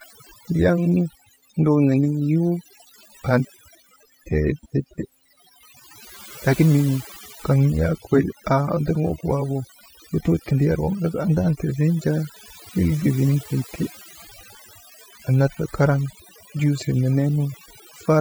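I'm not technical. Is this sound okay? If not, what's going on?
No. Overdone noise removal runs through the whole clip, from start to finish. A tool meant to clean away background noise was set far too strong. It shuts off any slice of the sound that looks like noise to it, and the quieter parts of the speech get cut along with the noise. That is why the background drops and breaks up into twinkling, warbling specks.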